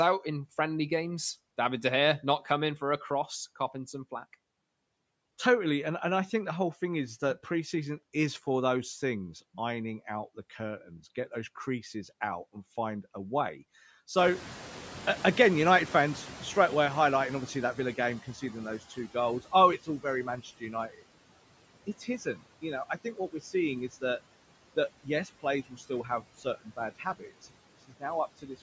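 Speech recording: a noise suppressor runs throughout, cutting steady background by about 18 dB frame by frame, so the noise sinks between phrases and rises under the voice. When the room noise jumps by about 19 dB near 14 s, just after "and find a way", the suppressor catching up takes 4.65 s (14.17 to 18.82 s), letting noise through at first before it sinks by about 14 dB. The suppressor then mistakes speech for noise, a case of speech cut by the noise suppressor, at 18.9 to 21.03 s, 21.86 to 23.54 s, 24.76 to 28.03 s and 28.38 to 28.62 s. Drops reach about 14, 14, 18 and 13 dB, leaving parts of the speech swallowed or faint for around half a second, half a second, a second and a brief moment respectively. The call microphone processing leaves nothing above 8 kHz.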